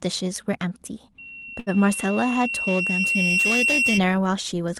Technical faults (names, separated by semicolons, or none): loudspeaker feedback squeal; short stall from a late packet